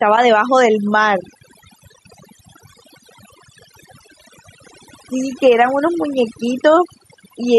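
From start to finish the background drops and breaks up into twinkling specks, and the voice's quieter parts fade away. This is overdone noise removal: the tool was set too hard, so narrow frequency bands near its noise estimate were pulled down or shut off, and soft voice detail went with them.

Throughout, the level swings by about 5 dB, leaving loud and soft parts squeezed together and the sound squashed. This is gain pumping, likely from the input gain set too high and a fast limiter or compressor clamping down on every peak.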